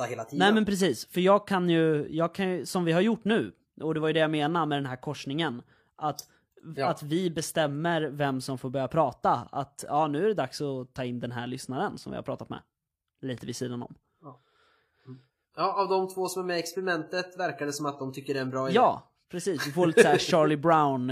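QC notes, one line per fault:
No technical faults are audible in this speech recording; the signal stays continuous and steady throughout.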